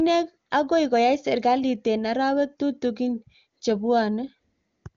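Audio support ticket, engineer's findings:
Nothing to flag here: the speech reaches us over the AMR-WB (HD Voice) path at 23.85 kbit/s, the codec's top rate, and no fault turns up anywhere in the recording.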